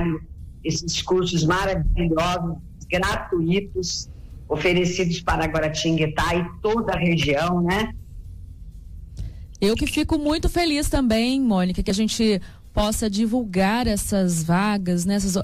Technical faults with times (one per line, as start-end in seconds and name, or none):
3.90 overlap between stream segments
11.90 overlap between stream segments